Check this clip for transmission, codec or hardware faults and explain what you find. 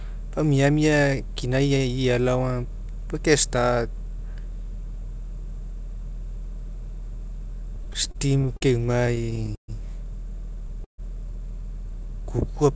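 Two kinds of fault appear, both from late packet delivery over a call path whose G.722 coding caps the audio at 8 kHz.

Repeated stalls (stutter) occur at 7.76 to 8.63 s and 9.00 to 9.70 s, with seven gaps each. Late packets emptied the jitter buffer. The receiver stretched the last sound, so the speech drags and stutters. Gaps reach 45 ms, then 130 ms.

A call audio freeze occurs at 10.84 to 11.00 s. The speech halts for 140 ms, mostly as silence. It is likely that packets were held up in transit. The speech then resumes intact.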